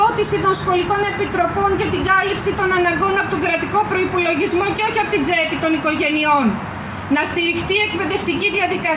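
Nothing to report: no technical faults can be heard anywhere in this recording.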